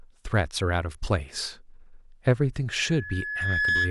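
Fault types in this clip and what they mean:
Loudspeaker feedback squeal: from 2.76 s to the end at 3.90 s, a 1.7 kHz tone swells over roughly a second until it sits about 5 dB above the speech, because the microphone re-captures its own loudspeaker and the loop gain at that frequency exceeds unity.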